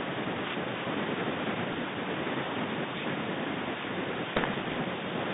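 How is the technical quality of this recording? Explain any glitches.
The recording is telephone-band speech with two glitches, both bit errors on an ADPCM link, at 1.72 to 1.83 s and 4.36 to 4.82 s. Bits flipped at a rate of somewhere under one percent. Each flip also knocks the decoder's adaptive step size and predictor off track, so the error keeps ringing for some milliseconds afterwards. You hear pops, rough bursts and brief jumps in level, and the longer second stretch is the more broken-up one.

Around these faults the line sounds band-limited to roughly 150 Hz to 3.7 kHz, with the light graininess of G.726 ADPCM, which fits the 32 kbit/s rate used on DECT cordless phones.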